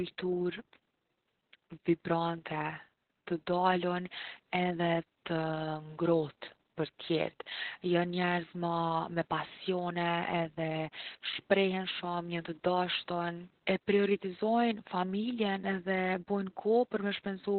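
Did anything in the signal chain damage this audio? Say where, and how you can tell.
Yes, at the codec stage, across the whole clip: the speech sounds muffled, hoarse and faintly robotic, with nothing above 4.2 kHz. That is Opus voice compression running SILK in narrowband mode, coding the excitation coarsely, which fits roughly 8 kbps.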